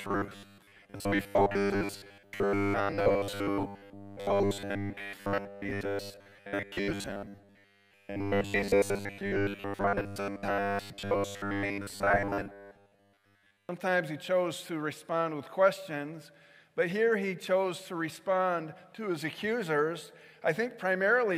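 From 0.01 s to 13.69 s the audio turns into a rigid metallic buzz at 100 Hz: robotic sound from repeated short buffers, likely caused by the same 10 ms chunk being replayed while most fresh audio is skipped. A spectrogram shows evenly spaced harmonic lines, and the waveform shows identical repeating cycles.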